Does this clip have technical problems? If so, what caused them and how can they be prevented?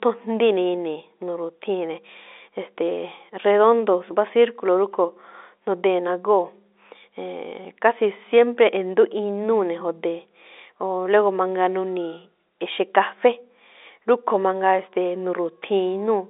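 No, there's nothing here to fix: the speech comes over an ordinary G.711 telephone line, so nothing above about 3.7 kHz gets through, which is just how that line works and needs no prevention.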